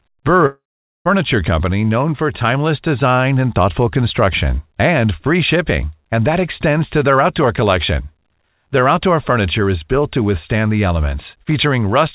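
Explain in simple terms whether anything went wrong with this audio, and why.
Early in the clip, at 0.46 s, the speech suddenly breaks into a short buzzy smear that fades away, leaving near-silence until the speech returns at 1.07 s. About 0.6 s of speech is simply gone. This is most likely a long network dropout: the audio stopped arriving, so the receiver briefly stretched the last bit of sound to cover the gap, then gave up and went quiet until the audio resumed. The clip's sound, which has nothing above 4 kHz, fits a phone-style call connection.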